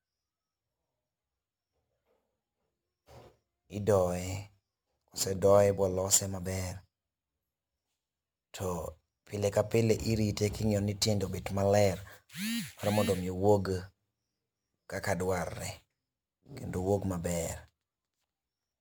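Speech, with crude rate conversion throughout. Samples are repeated rather than filtered, which fits a 44.1 kHz to 48 kHz change. It leaves a gritty, inharmonic fizz about 20 dB below the speech.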